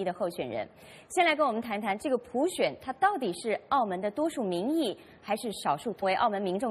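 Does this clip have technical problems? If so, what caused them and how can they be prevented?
Yes. At 6.02 s the sound abruptly jumps forward with a small blip, as if a stretch of material were missing. This is likely a stream segment skipped: one chunk of a segmented stream failed to load, so the player moved straight on to the next. Larger player buffers and retrying failed segment requests help prevent it.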